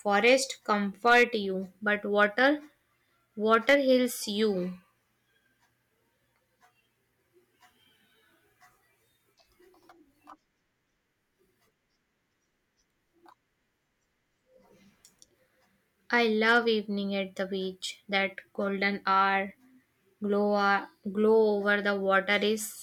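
Hard clipping cuts the speech's peaks flat where the level exceeds what a stage can pass: at 0.15–0.34 s, 1.07–1.23 s before "you but", 3.53–3.75 s before "heals you" and 16.14–16.58 s before "evening at the beach". The overdrive is about 3, 5, 5 and 2 dB. It is heard as brief crackle. The waveform shows squared-off tops, and the spectrogram shows vertical smears of high harmonics.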